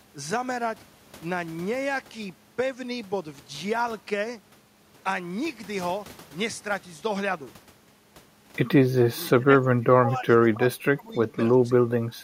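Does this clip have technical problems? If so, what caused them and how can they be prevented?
Yes. From 9.09 to 11.89 s the speech repeatedly dips and breaks up, with the deepest cut about 20 dB and around one and a half seconds affected in pieces. A shorter dip of about 10 dB follows at 12.16 to 12.24 s. This is speech suppressed in double talk, likely from an echo canceller that could not separate the near talker from loudspeaker echo and attenuated both. Prevention: use a canceller with proper double-talk detection and reduce speaker-to-microphone coupling, for example with a headset.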